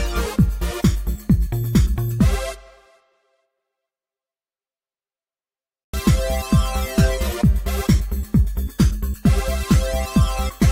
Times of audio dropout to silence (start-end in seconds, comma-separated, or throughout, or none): none